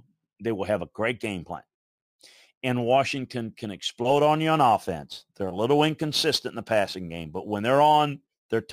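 From 4.07 s to the end, the speech gains a gritty, inharmonic fizz riding on louder and brighter sounds, sitting roughly 25 dB below it. This is crude rate conversion: samples were simply dropped without filtering, which fits a 48 kHz to 44.1 kHz change.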